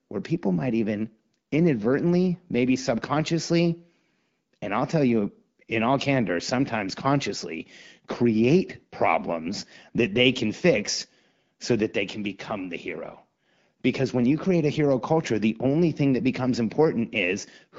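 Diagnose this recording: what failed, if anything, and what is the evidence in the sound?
Nothing failed in this speech recording: it carries the band-limited character of the AMR wideband (HD Voice) codec at 12.65 kbit/s, which codes the speech up to 6.4 kHz and fills the band to 7 kHz with shaped noise, and at that rate the speech comes across clear.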